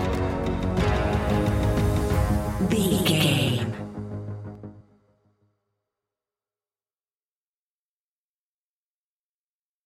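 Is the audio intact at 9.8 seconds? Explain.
Yes, the audio is intact at 9.8 seconds, with no audible fault at that moment.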